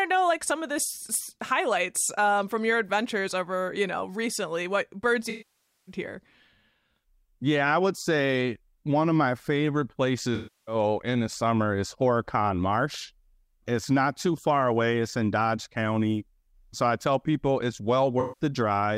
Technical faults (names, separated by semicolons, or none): AAC frame loss with concealment